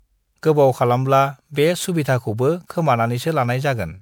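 Repeated lossy MP3 re-encoding, likely around seven passes at what sounds like 128 kbit/s, causes generation loss throughout this speech: swirly, hollow and smeared, with blurred consonant attacks.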